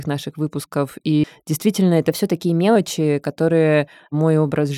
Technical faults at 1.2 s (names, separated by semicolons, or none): CD skip